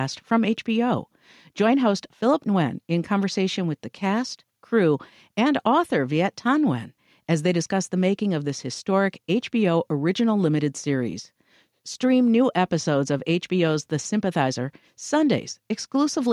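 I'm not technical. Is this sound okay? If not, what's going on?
Yes, this sound is okay; nothing is going on with it.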